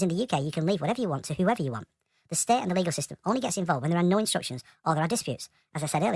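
From start to finish the speech sounds high and hurried, running at 1.5 times normal speed and raised about 7 semitones. It is a wrong sample rate fault. Audio recorded at 16 kHz is being played at 24 kHz without conversion, so pitch and tempo both shift by that ratio.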